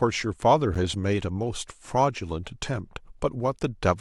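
At 0.75 s, a gap between stream segments: mismatched segment timestamps leave an 11 ms hole the player fills with silence, cutting the speech with a hard-edged dropout.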